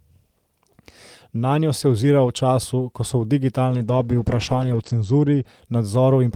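From 3.7 to 5.51 s, after "času ko so v", a call bitrate drop starves the encoder, leaving speech coarse and muffled below 8 kHz, unbroken, unlike packet loss.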